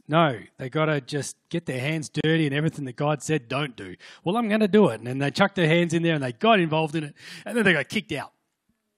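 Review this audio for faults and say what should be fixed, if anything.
A short hole of silence opens in the speech from 2.21 to 2.24 s, about 33 ms long, with smeared edges, after which the sound resumes exactly where it broke off. This is a gap at a join of encoded pieces: two separately encoded segments were spliced without trimming, so the encoder's start-up delay and the padded final frame both remain at the seam. To prevent it, trim encoder delay and padding before joining, or encode the material as one continuous stream.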